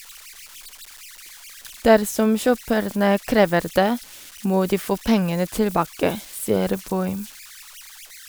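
From start to finish the speech carries converter idle tones. A delta-sigma converter running without dither settles into repeating bit patterns whenever its input is small, and those patterns produce a tone whose pitch follows the input offset. Here it sits around 1.5 kHz, about 22 dB below the signal. It comes through as a whistle in the pauses between phrases and as a grainy, gritty layer beneath the quieter speech.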